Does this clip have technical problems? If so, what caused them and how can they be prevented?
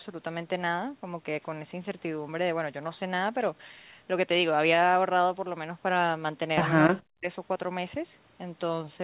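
Yes. From 6.88 to 7.29 s the speech drops sharply, by about 40 dB, likely from speech suppressed in double talk: the echo canceller could not separate the near talker from the overlapping far-end echo and attenuated both. Better double-talk detection, or headsets that remove loudspeaker echo, prevents this.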